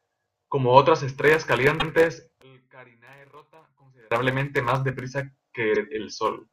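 At 1.79 s, just after "otras estrellas", the speech stutters. This is repeated frames: a block of about 105 ms of compressed audio plays twice, which fits four codec frames being sent again. The decoder replays the same slice, so the sound jumps back and repeats itself. The clip gains about 105 ms.

From 2.42 s to 4.12 s, ending just before "más deprisa", the level falls by about 29 dB. The speech becomes a faint trace. The likely cause is one channel inverted. With one side's polarity reversed, the centred speech cancels when the channels are summed. Only the small difference between them remains.

At 5.74 s, right after "más deprisa", a shorter stutter occurs. Again it is repeated frames. About 52 ms replays once, consistent with two frames. It adds 52 ms.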